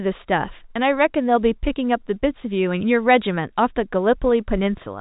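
No technical faults occur at any point in the speech, which carries the narrow band of G.711 telephone coding with nothing above 3.8 kHz.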